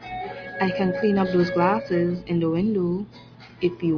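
No technical faults can be heard anywhere in this recording.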